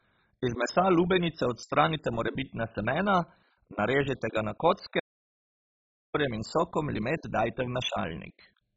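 Throughout, the speech sounds dull and gurgling, likely from heavy MP2 compression at a very low rate near 16 kbps. The spectrogram shows nothing above 7.5 kHz and flickering upper bands. At 5.00 s, after "narežite ga na", an audio dropout to silence, likely a lost input, leaves a silent gap for 1.15 s until "in sokom" at 6.15 s.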